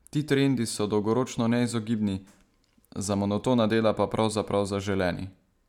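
No technical faults are audible anywhere in the speech recording.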